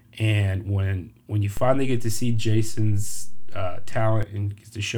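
At 1.57 s a DC step occurs. The waveform's zero line suddenly shifts by about -20 dBFS, as if an offset voltage entered the signal path. That abrupt jump is heard as a low thump under the speech. The offset then holds steady, which is inaudible in itself. At 4.23 s the baseline steps back to zero, producing a second thump. Between the two thumps the speech continues unchanged.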